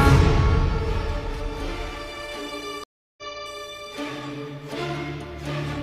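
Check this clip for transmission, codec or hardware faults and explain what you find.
There's one clear problem, a stream reconnect between 2.84 and 3.23 s. The connection drops, the player goes quiet for about 0.34 s, then reconnects and spins up a fresh decoder partway through the stream. Because it rejoins where the live feed has moved on, the sound picks up roughly a fifth of a second later than where it cut off, so a chunk is just missing. The first frame or so comes back muted or fading in.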